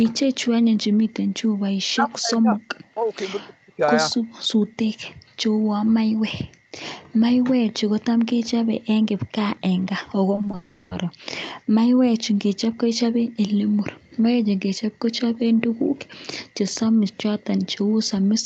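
Between 1.89 and 5.33 s, speech is suppressed in double talk, most likely because the echo canceller could not tell the near talker from the far side's echo and turned everything down. The speech sinks deeply, by something like 40 dB, from 1.89 to 2.57 s, from 3.45 to 3.81 s and from 5.26 to 5.33 s. There is a lighter dip of about 10 dB from 2.94 to 2.99 s. Syllables vanish in pieces and then return.

At 9.81 to 9.86 s there is an echo leak, likely where a loudspeaker's sound got past the far end's echo canceller and was sent back. It is a brief copy of the speech arriving 235 ms late. It sits far below the live speech, around 35 dB down, so it is only a faint scrap behind it.

From 10.35 to 10.55 s, repeated packet loss gives a robotic sound. Several short holes, none longer than 20 ms, each get patched by stretching the last bit of audio. That concealment covers about 40% of the stretch, so the sound turns choppy, with fragments missing. 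It fits a run of four lost 20 ms packets.

This runs straight into a long network dropout from 10.55 to 10.93 s, likely a stall where no audio arrived for 360 ms. The receiver keeps extending the last sound as a buzzy, fading tone across the whole gap instead of falling silent. Speech then resumes with that section simply gone. Throughout, the Opus call path leaves nothing above 8 kHz.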